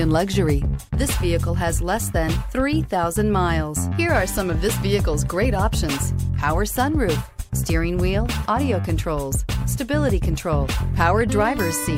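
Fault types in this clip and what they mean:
Nothing stood out on listening to the audio.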